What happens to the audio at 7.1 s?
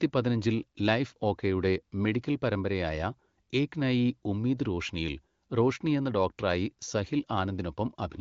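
At 7.1 s the speech continues without any audible fault, carried through the AMR wideband (HD Voice) codec at a rate that keeps it clear, with content reaching only to about 7.3 kHz.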